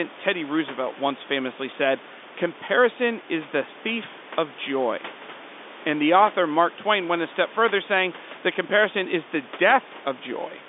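No technical faults can be heard anywhere in the recording. The speech comes over a telephone line carrying roughly 250 Hz to 3.6 kHz, with room noise sitting about 21 dB below it.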